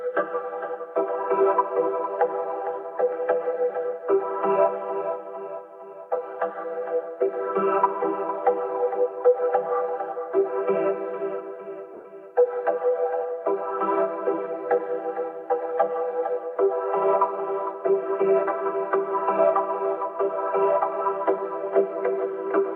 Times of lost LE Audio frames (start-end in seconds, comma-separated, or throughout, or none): 11.94-12.05